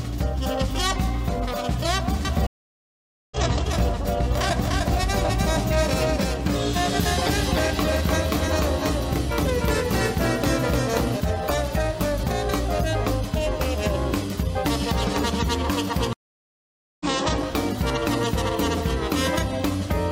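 At 2.25 s a doubled audio track begins: a second, full-band copy of the sound runs roughly 300 ms behind the original and about 5 dB quieter. It carries no decay or room colouring, so it reads as a clean, late echo rather than reverberation. It most likely comes from the signal being captured a second time through a slower path, or from an edit holding two copies out of step. The copy cuts in abruptly and drops out just as abruptly at 11.17 s.

Overlapping it, a stream reconnect occurs from 2.47 to 3.37 s. The connection dropped, leaving about 0.85 s of silence. The player then reconnected and started a fresh decoder mid-stream, so the audio resumes roughly half a second further on than where it stopped. The first frame or so after the gap is muted or fades in.

A second stream reconnect follows from 16.13 to 17.05 s. It has about 0.87 s of silence, and the audio picks up roughly 0.7 s later in the material, with the same soft restart.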